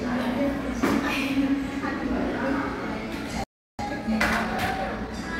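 At 3.44 s the audio cuts to silence mid-flow and stays silent until 3.79 s, a gap of about 0.35 s. This playback stall is most likely the player running out of buffered data or having its output thread blocked, so nothing reached the output until it recovered.

From 3.79 s to 5.35 s a time-compressed catch-up follows. The player works off its backlog by dropping short slices and cross-fading across the joins. The sound runs about 1.15 times fast at unchanged pitch.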